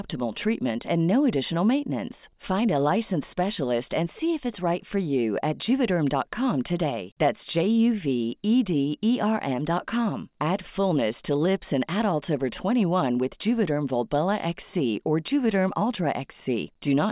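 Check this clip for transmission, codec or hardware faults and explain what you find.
I found no faults to explain in this clip.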